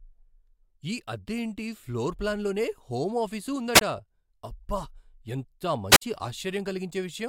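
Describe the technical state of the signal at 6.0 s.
At 6.0 s the radio link of the wireless microphone has faded far enough for the receiver's squelch to shut the output, a wireless microphone squelch dropout spanning 5.91 to 6.02 s. A brief surge of hiss gives way to a near-silent gap of about 54 ms before the speech resumes.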